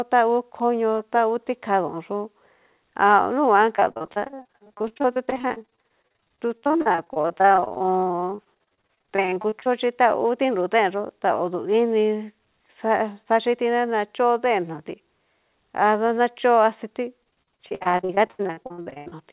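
From 3.76 to 9.68 s and 17.24 to 19.14 s, repeated packet loss makes speech choppy and robotic. Dense holes of up to 41 ms, then 82 ms, are patched with stretched sound rather than left as one clean dropout.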